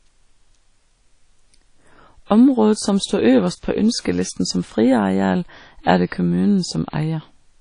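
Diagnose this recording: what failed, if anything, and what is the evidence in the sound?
The codec stage likely applied WMA compression at a low bitrate, fitting about 32 kbps. The speech sounds washy and ringing, with nothing above 10.1 kHz.

Pre-echo from the same transform codec: quantisation noise spread across a whole block leaks ahead of an attack, giving a short hiss from 4.00 to 4.05 s.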